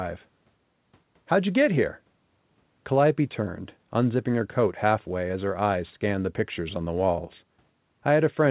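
Speech over a call path whose band stops at 4 kHz, consistent with narrowband G.711 A-law telephony, with no technical faults to report.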